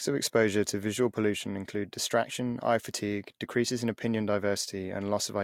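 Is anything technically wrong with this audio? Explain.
No, nothing technically wrong can be heard in this speech recording; the signal stays intact and steady throughout.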